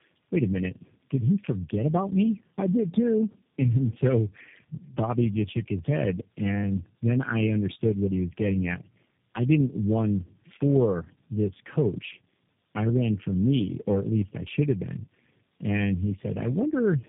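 Tandem speech coding runs throughout: the speech sounds coded three times in a row, probably ending in G.729A, each pass roughening, muffling and warbling it further, with nothing above 3.7 kHz.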